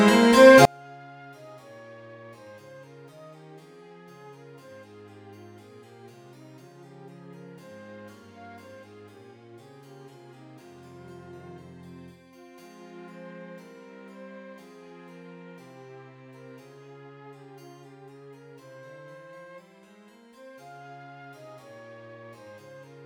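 From 0.65 s to the end, the sound collapses to a faint, hollow remnant about 36 dB down when heard in mono, with its centre almost gone. This points to one channel inverted: the likely cause is that one side of the stereo pair has its polarity flipped, so whatever the two channels share cancels on summing. Only the small difference between them survives, which is why what remains sounds so faint.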